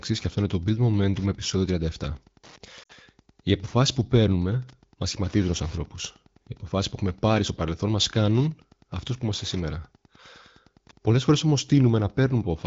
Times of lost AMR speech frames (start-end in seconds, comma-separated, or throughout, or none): 2.83-2.92